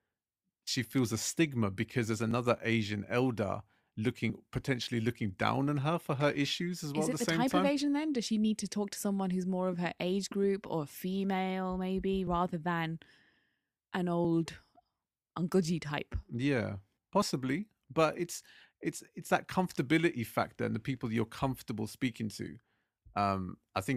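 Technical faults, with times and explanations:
2.31, 4.30, 12.27, 14.25, 16.23 and 17.22 s, overlap between stream segments: The speech jumps briefly six times, first just after "a stigma because there's", then just before "potentially looking down on", then after "group or female maybe". Each time, 5 to 10 ms of real audio is cut. The segments are 1 s long. Their time stamps overlap, so the player drops audio it wrongly treats as doubled. The waveform jumps, and each jump is heard as a click or tiny skip.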